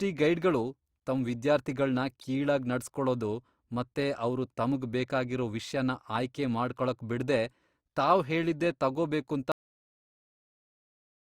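A speech clip with a cut-off end: right after "ಬಿಡ್ದೇ ತಾವ್ ಹೇಳಿದ್ದೇ ತಗೊಬೇಕೂಂತ" at 9.52 s the sound stops abruptly into digital silence without decay, because the final buffers were never written.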